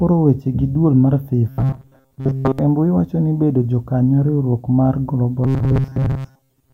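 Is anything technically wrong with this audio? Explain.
Yes. Robotic sound from repeated short buffers appears twice: from 1.49 to 2.59 s, between "gi e duol mar" and "embui wako ni bedo", and from 5.44 s to the end. The speech becomes a rigid, metallic buzz locked at 133 Hz that still loosely tracks the words. The likely cause is audio arriving too seldom, so a fragment of about 7.5 ms is replayed in place of most of the real signal. Unlike a low-bitrate codec's watery smearing, the buzz sits at a fixed rate.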